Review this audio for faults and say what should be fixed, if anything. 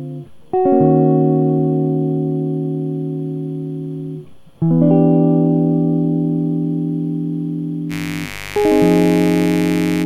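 Mains buzz enters at 7.89 s and runs to the end of the music at 10.06 s, a steady, raspy layer sitting roughly 15 dB below the program. It is built on 50 Hz: sharp switching spikes, twice per mains cycle, leak in from a dimmer, a rectifier or an unshielded line, and their harmonics stack up into the kilohertz range, which is why it rasps rather than hums. Prevent it by keeping dimmers and switching supplies off the audio circuit and using properly shielded, grounded cabling.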